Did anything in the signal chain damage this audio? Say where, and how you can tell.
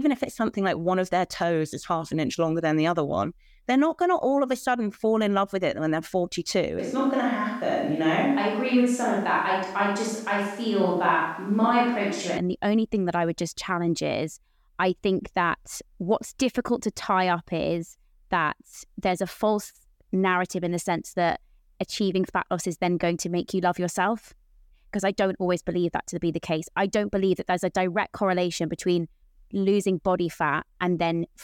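Yes. From 6.79 s to 12.37 s the speech suddenly turns roomy and hollow, with thinner bass, then snaps back just before "and the only thing". This is a switch to a distant microphone at the capture stage, most likely because the close mic's feed dropped out and a farther pickup took over. The level barely changes. Room noise rises to roughly 35 dB below the speech. The abrupt edges at both ends point to a source change, not acoustics.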